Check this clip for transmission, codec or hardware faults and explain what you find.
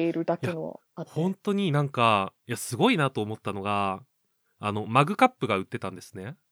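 Nothing stood out on listening to the speech here; I heard nothing that pointed to a problem along the way.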